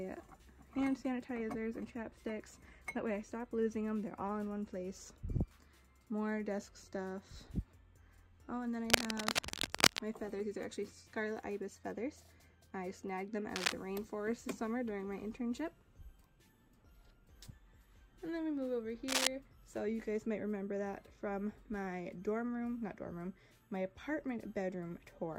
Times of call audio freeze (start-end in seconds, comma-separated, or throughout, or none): none